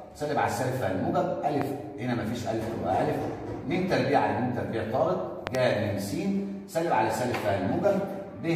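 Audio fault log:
1.62–1.64 s and 5.47–5.57 s, loud pop. One sharp pop first, about 15 dB above the sound. Then two pops in quick succession, about 20 dB above. The sound carries on beneath them. A sudden voltage step or pulse, likely from a plug, switch or static, causes this.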